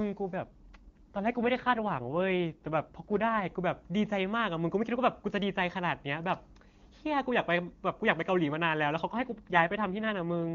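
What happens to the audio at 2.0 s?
At 2.0 s the speech is in the middle of an AMR rate drop that runs from 0.37 to 3.50 s. The network has pushed the wideband codec to a lower mode and spent the freed bits on error protection. The roughness fits a fall from the clear 23.85 kbit/s mode to around 8.85 kbit/s. The voice turns raspy and synthetic, but the bandwidth holds and nothing drops out, which sets it apart from a narrowband fallback or packet loss.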